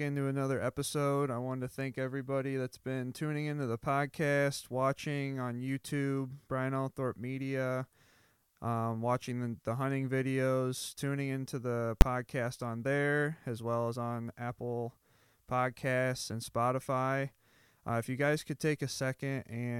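At 12.01 s, between "videos tuning into the" and "podcast on there as", invalid numbers at full scale: a 10 ms block of infinite or invalid values held flat at one extreme value, heard as one sharp bang.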